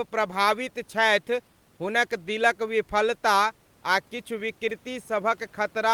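No technical faults are audible in this speech; the only other sound is the room's own background noise, sitting about 37 dB below the voice.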